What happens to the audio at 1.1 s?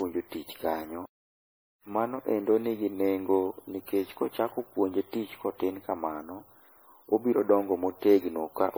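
The sound cuts out from 1.06 to 1.83 s, a playback stall of about 0.77 s, likely from the player running out of data. It shows as a flat waveform gap with an empty spectrogram column before resuming. Generation loss also runs through this moment, likely from around ten rounds of lossy re-encoding, which fits a 64 kbit/s MP3 chain. It sounds swirly and hollow, with a smeared spectrogram and upper-band holes.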